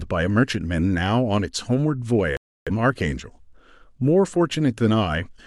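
At 2.37 s the receiver stopped getting decodable frames and muted until clean data returned at 2.71 s. This is a digital broadcast dropout: the speech drops to silence for about 0.3 s, which fits a handful of lost frames, and that stretch is gone.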